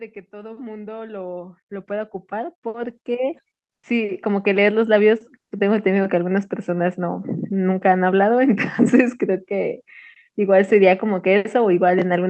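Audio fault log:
0.05–5.17 s, automatic gain rising: gain climbs steadily by about 19 dB, so the sound and its background swell together as the control lifts a quiet input.
3.75–3.83 s, comfort noise in place of the background: for 80 ms the real background gives way to flat, featureless noise about 13 dB quieter, likely Opus DTX filling a pause.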